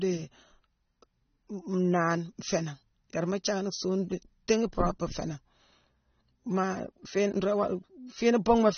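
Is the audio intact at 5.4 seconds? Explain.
No. At 5.4 seconds the speech carries AAC compression damage that runs through the whole clip, not just this moment, and it is plainly audible. The sound is dull and smeared, with a fizzy, warbling edge on sibilants and sustained vowels, which points to a likely low-bitrate AAC-LC encode around 24 kbps. The encoder discarded everything above about 6.3 kHz, so a spectrogram shows a hard ceiling there.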